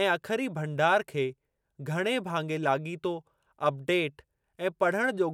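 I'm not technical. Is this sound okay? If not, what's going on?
Yes, this sound is okay, and there's nothing wrong with it that needs explaining.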